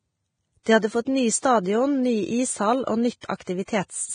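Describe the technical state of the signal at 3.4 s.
Two pre-echo smears sit right there, 3.36 to 3.40 s and 3.44 to 3.47 s: the codec's block-wide quantisation noise leaks ahead of each attack as brief hiss, blurring it. Underneath, the sound is hissy and grainy with nothing above 9.7 kHz, likely heavy Vorbis compression at a low bitrate, somewhere around 22 kbps.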